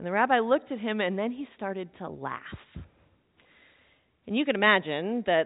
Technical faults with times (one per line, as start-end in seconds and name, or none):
none